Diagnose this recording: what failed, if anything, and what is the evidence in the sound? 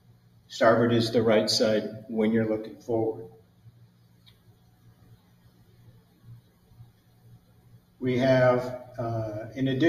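The fault sits in the call-processing stage: a noise suppressor built for speech was left active on non-speech material, so the noise suppressor was applied to music or sounds. It treats sustained tones, ambience and reverberant tails as background noise and pulls them down, while transients slip through. The result is level that breathes and flutters across the whole clip, with the suppressor's gain swinging by roughly 20 dB, and held material thinning out between attacks.

Specific passages show sound cut by the noise suppressor, where its gain dropped further than elsewhere: 0.00–0.49 s, 3.38–5.81 s, 5.98–6.25 s, 6.41–6.75 s and 6.91–8.00 s. In each, the sound sinks by about 7 dB at its deepest (about 6 dB in the 6.41 s stretch), with the longest dip running roughly 2 seconds from 3.38 s. The suppressor judged these sustained or decaying stretches to be noise and clipped their level and decay.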